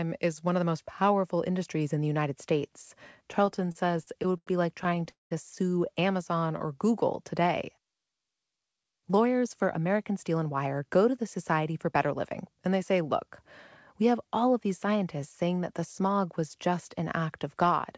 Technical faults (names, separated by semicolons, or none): repeated stalls (stutter); call audio freeze; jitter buffer speed-up